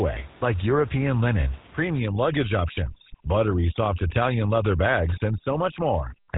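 A buzzy, gravelly roughness runs through the whole of this speech recording, and nothing reaches above 3.8 kHz. That points to the GSM full-rate codec, whose damage is plainly audible here, consistent with a 13 kbps stream that models the vocal tract and drives it with a coarse pulse excitation. From 1.99 s to the end at 6.37 s, the room noise, sitting about 24 dB below the speech, drops and breaks up into twinkling specks. This is overdone noise removal, with a noise reduction stage clamping down any frequency band close to its noise estimate and stripping quiet parts of the speech along with the background.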